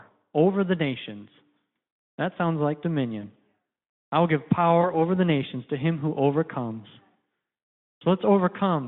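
Speech over a narrowband Speex link shows VoIP packet loss concealed by the speech codec at 3.22–3.29 s, after "sounds like", and 4.81–4.99 s, between "I will give" and "the nations to him". Each gap fits one lost 20 ms packet. The decoder extrapolates a buzzy or noisy, fading smear that lingers while it recovers.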